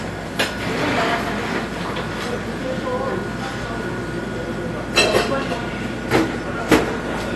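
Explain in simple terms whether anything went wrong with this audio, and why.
Something did go wrong, and it affects the whole clip from start to finish. The sound is dull and smeared, with a warbling or fizzy texture where it should be smooth. Nothing is present above about 12.1 kHz, so the crisp top end is simply missing. This points to AAC compression as the likely cause: the file was squeezed hard enough that the encoder threw away the highest frequencies and coarsened the rest.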